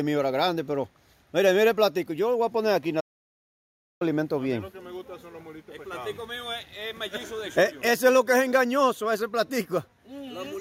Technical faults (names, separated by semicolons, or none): playback stall